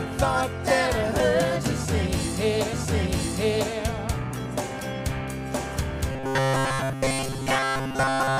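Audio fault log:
6.12–8.39 s, robotic sound from repeated short buffers: audio likely stopped arriving in time, so roughly two thirds of this stretch is a brief slice of about 7.5 ms replayed while real audio is dropped. The loop forces a rigid metallic buzz near 134 Hz.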